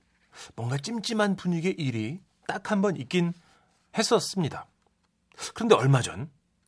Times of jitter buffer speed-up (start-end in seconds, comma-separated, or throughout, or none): none